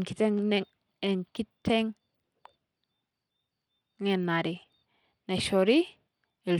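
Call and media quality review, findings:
Bluetooth SBC compression, throughout the speech. Treble thin and flickery, a gritty grain sitting on everything, some aliasing hash. Likely an SBC link at a low bit pool, which fits roughly 96 kbps: the top sub-bands get starved of bits and drop in and out, and the remaining bands are coarsely quantised, so the grit tracks the speech.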